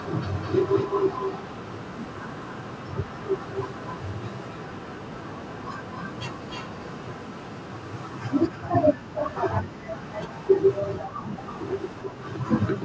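Speech with an echo leak: a delayed copy trails the voice by 258 ms from 0.00 to 9.38 s, roughly 10 dB down, then by 301 ms at 10.02–10.81, 11.32–12.02 and 12.19–12.70 s, fainter. It is likely a loudspeaker echo the far end's canceller missed. Unlike room reverb, it is a distinct, separated repeat.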